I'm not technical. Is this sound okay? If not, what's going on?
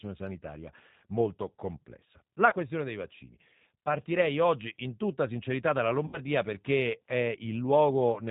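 No. The whole clip runs through the G.729 codec, a phone-call compressor that rebuilds speech from a rough model of the voice. That's why it sounds slightly gritty and artificial, not just muffled like a plain narrow phone line, with nothing crisp up top.

There is also VoIP packet loss concealed by the speech codec, at 2.50 to 2.55 s and again, longer, at 6.07 to 6.20 s. Chunks of the call went missing, and the decoder filled them by stretching the last sound into a fading buzz or noise. You hear a smeared, weakened patch rather than a clean silent gap.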